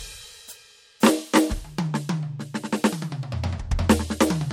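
A music clip whose top end stops dead at 16.6 kHz for its whole length, with the smeared, swirly highs of heavy perceptual coding. On a spectrogram this shows as a hard, flat ceiling at 16.6 kHz from start to finish, with empty black space above it; the waveform itself looks ordinary. This is likely low-bitrate audio saved at a high bitrate: an MP3 at something like 64 kbit/s re-encoded at a rate such as 320 kbit/s, which keeps the original damage.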